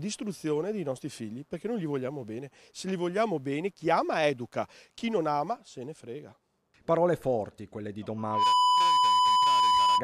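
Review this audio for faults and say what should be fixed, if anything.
Loudspeaker feedback squeal from 8.17 s to the end: a microphone is picking up its own loudspeaker, and at 997 Hz the loop gain passes unity. That tone swells within about a third of a second and holds roughly 10 dB above the rest of the sound. To prevent it, lower the monitor gain, move the microphone out of the speaker's coverage, or notch the 997 Hz band.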